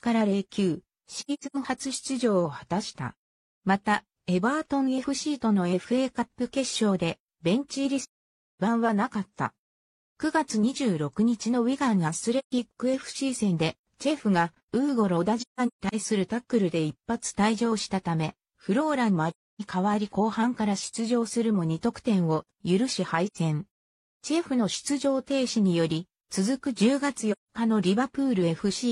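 The audio has AAC frame loss with muting, heard as soft-edged gaps at 1.19–1.56 s (broken up, longest run about 100 ms), 8.01–8.59 s, 12.38–12.52 s, 15.40–15.95 s (broken up, longest run about 150 ms), 19.29–19.61 s, 23.26–23.37 s and 27.32–27.49 s. The decoder replaced the missing frames with zero spectrum, and the overlapping transform windows fade the sound out and back in across each hole.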